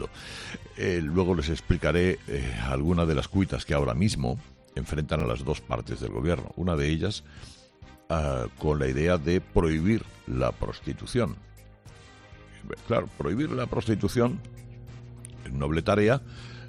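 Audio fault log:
5.20–5.24 s and 13.14–13.21 s, Bluetooth stutter: two short glitches where the link briefly dropped out and the receiver filled the gap by replaying its last chunk of buffered audio. The first covers about 23 ms, which fits a single lost frame. The second covers about 46 ms, more like two frames back to back, so it has a brief buzzy double-repeat. Each time the sound picks up further along, as though it kept playing underneath.
13.35 s to the end, mains hum: a steady 60 Hz tone appears here and sits under everything to the finish, roughly 20 dB below the programme. That's the power line bleeding into the signal path, most likely through a ground loop or a transformer close to the cabling. It comes in as a low, constant drone rather than anything that comes and goes.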